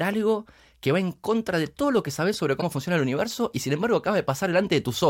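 A short speech clip with one glitch: damaged data in the compressed stream, from 2.58 to 2.63 s, right after "lo que sabes sobre" and before "funciona el universo y". The decoder hits corrupted frames, loses sync and hunts for the next valid header, leaving a brief disruption of about 50 ms.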